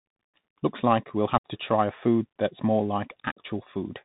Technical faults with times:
0.00-4.05 Bluetooth CVSD headset codec
1.38-1.46 unconcealed Bluetooth headset packet loss

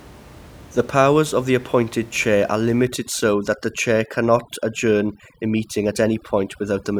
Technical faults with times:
2.85-6.99 overdone noise removal

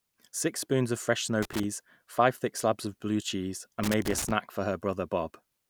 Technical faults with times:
1.42-1.64 loose connector crackle
3.83-4.31 loose connector crackle

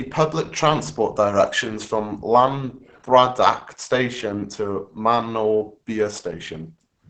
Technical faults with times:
0.00-7.09 Opus compression

